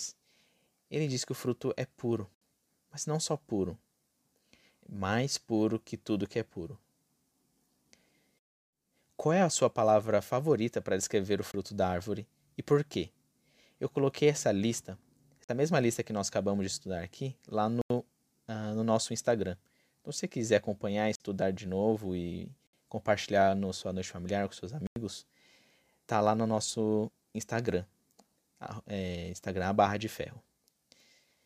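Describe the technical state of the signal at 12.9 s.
At 12.9 s the speech signal is intact, with no fault audible at that moment.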